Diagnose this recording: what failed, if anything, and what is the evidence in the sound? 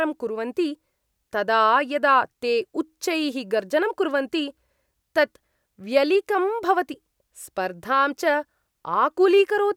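Nothing failed: no stage of the chain, from capture through playback, leaves an audible fault anywhere in the speech.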